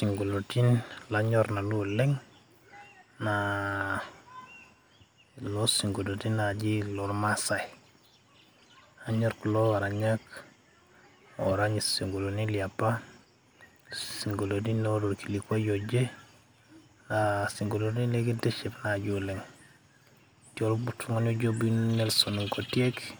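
A recording of speech, and there's nothing technically wrong to point to anywhere in it.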